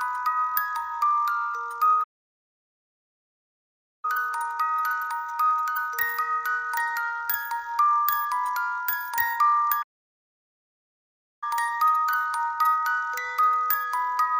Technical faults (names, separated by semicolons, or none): playback stall